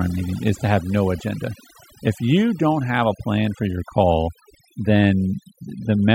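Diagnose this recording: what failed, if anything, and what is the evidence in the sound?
Overdone noise removal at the call-processing stage, throughout. Background gaps sink to near silence with twinkling specks. Quiet parts of the speech were stripped along with the noise bands.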